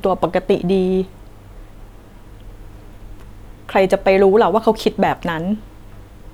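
No technical faults can be heard anywhere in the recording.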